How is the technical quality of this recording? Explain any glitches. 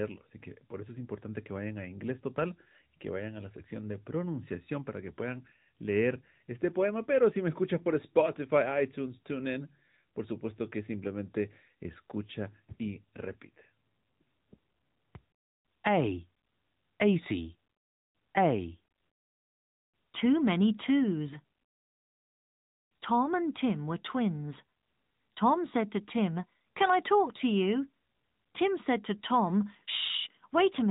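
The recording has passed through the AMR narrowband mobile codec, and the damage is plainly audible for the whole clip. The speech was squeezed into a telephone-grade channel: sampled for an 8 kHz system and rebuilt from a compact vocal-tract model with a few excitation pulses per short frame. The moderate bit budget fits a 10.2 kbps mode. Nothing survives above about 3.8 kHz, so the speech sounds muffled and boxy, with a synthetic, buzzy edge to it.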